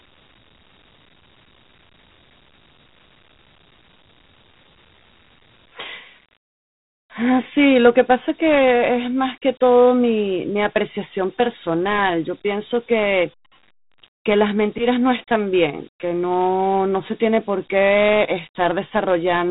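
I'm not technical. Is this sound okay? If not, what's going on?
No. From start to finish the speech has Dialogic VOX ADPCM damage, from an old phone-menu and voicemail format. Nothing above 3.8 kHz survives, so it sounds muffled like a phone line, and the coarse coding leaves a gritty hiss trailing the speech.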